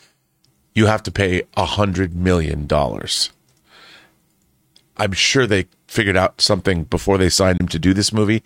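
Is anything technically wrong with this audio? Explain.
Yes, there is a Bluetooth dropout from 7.57 to 7.60 s. The speech cuts to silence and then resumes further along, with about 20 ms skipped, which fits a single packet that likely never reached the headphones in time. On a waveform or spectrogram it appears as a narrow, sharp-edged blank gap.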